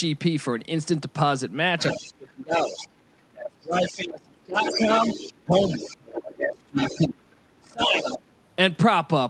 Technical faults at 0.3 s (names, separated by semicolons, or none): none